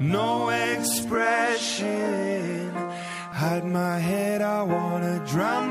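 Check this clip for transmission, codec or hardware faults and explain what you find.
One fault stands out: between 1.14 and 3.32 s the audio abruptly loses its top end and then regains it, most likely from an input switched to a poorer device. The replacement capture path passes nothing above 11.4 kHz and brings its own faint noise floor, roughly 40 dB below the signal, so the sound turns duller with a slight hiss while loudness stays about the same and no gap marks either switch. On a spectrogram the high band is cleanly cut off at 11.4 kHz across that span. The waveform envelope shows no break or step.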